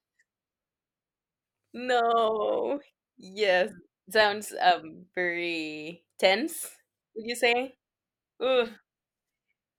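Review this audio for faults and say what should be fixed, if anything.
No faults; nothing needs fixing.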